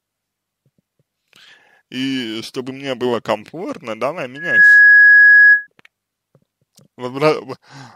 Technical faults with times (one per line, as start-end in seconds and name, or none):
4.36-5.67 loudspeaker feedback squeal